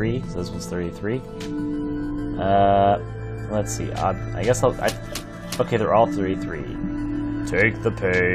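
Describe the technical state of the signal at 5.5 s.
Around 5.5 s the signal is intact, with no audible dropout, distortion, or other fault at that point.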